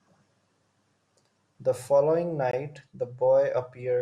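At 2.51 s the speech drops to silence for 19 ms, then resumes at 2.53 s. This is a Bluetooth stall, likely caused by radio interference delaying packets until the headphones' buffer emptied and playback paused while resent data arrived.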